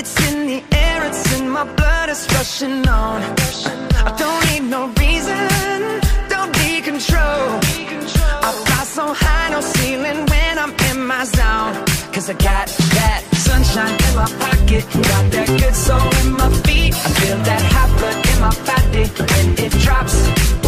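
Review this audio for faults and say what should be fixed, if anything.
No faults found; nothing needs fixing.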